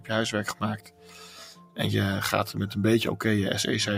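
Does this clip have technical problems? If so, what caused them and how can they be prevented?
Yes. A noise suppressor applied to music or sounds runs throughout, treating steady tones and tails as noise, so the level swings by around 10 dB and pumps. Sound cut by the noise suppressor, 0.78 to 1.78 s: the sound there was judged as noise and pulled down by about 11 dB. Prevent both by disabling speech noise suppression when capturing non-speech audio.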